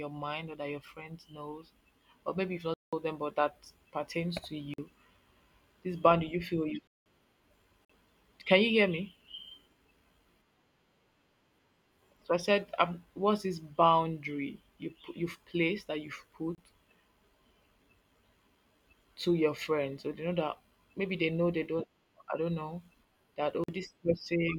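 Hard-edged dropouts break the speech at 2.74 s, 4.74 s (after "but that pertains to"), 6.87 s (after "boundary you feel you"), 7.85 s, 16.55 s and 23.64 s (after "I don't know that"). The holes at 2.74 s and 6.87 s last 186 ms. The others are short holes of about 30 to 46 ms. Each is a block of digital silence, where zeros replaced the audio with no fade. Most of the lengths fit 2048- and 8192-sample buffers that were not filled in time.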